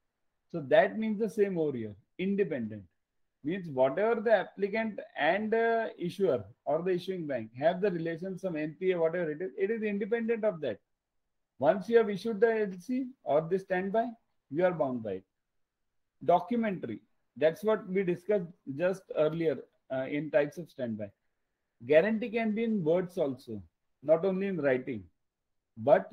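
No technical faults can be heard anywhere in the audio.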